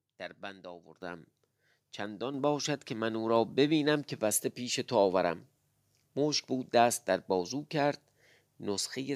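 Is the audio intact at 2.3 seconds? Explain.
No: the microphone volume stepped up at 2.34 s. The input gain rose by about 5 dB in one step, so speech and background jump louder together.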